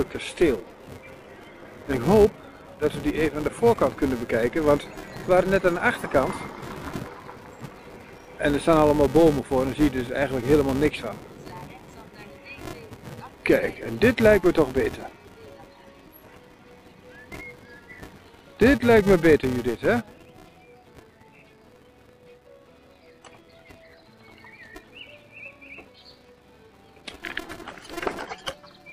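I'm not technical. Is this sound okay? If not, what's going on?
No. A filter restarted on every block: the processing forgets where it left off each time it handles the next small chunk of audio, and starts that chunk from silence. Each restart leaves a tiny click, and those clicks come about 345 times a second, which fits chunks of 128 samples. They blur into a steady buzz underneath the sound for the whole clip, louder when the sound is louder and fading when it goes quiet.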